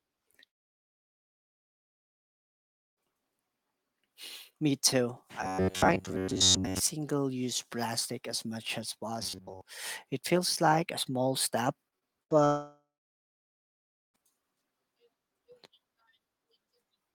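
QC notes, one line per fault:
0.47–2.99 s and 12.45–14.20 s, long network dropout. About 2.5 s and then 1.7 s of audio are missing. Each gap starts with a short fading continuation of the last sound, then settles into silence. The likely cause is audio that never arrived, and playback resumes past the lost part.
5.42–6.81 s and 9.23–9.61 s, robotic sound from repeated short buffers. The first stretch ends just before "use plastic as much", and the second begins right after "plastic as much as". A rigid, metallic buzz near 94 Hz replaces most of the sound. It likely comes from a roughly 10.7 ms buffer being looped while fresh audio is skipped.
11.89–12.33 s, repeated packet loss (robotic sound). Just after "like a small step", four quick holes cut the sound, the longest 74 ms, with about 140 ms lost in total. Patching each hole with the preceding sound covers about 30% of the stretch, so it comes out choppy with pieces missing.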